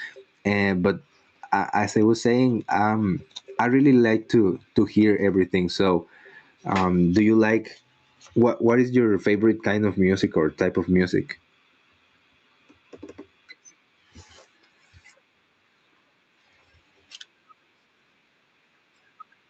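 Gain pumping runs through the whole speech clip. The gain swings by around 15 dB, pulling down under loud sounds. Likely cause: excessive mic gain driving a fast limiter, heard through an 8 kHz call band.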